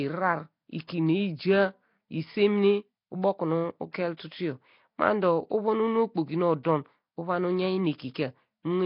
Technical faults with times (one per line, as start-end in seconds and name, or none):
0.00-8.86 Nellymoser compression
0.87 pre-echo
3.92-3.94 pre-echo
6.63 pre-echo